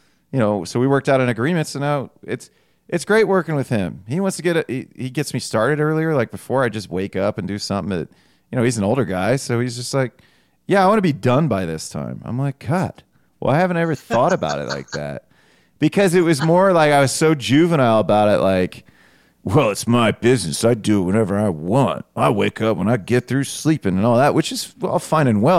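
No technical faults are audible anywhere in the recording.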